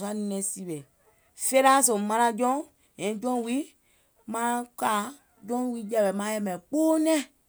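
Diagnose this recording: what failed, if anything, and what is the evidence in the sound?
Nothing failed: no stage in the chain, from capture to playback, leaves any audible fault in the speech.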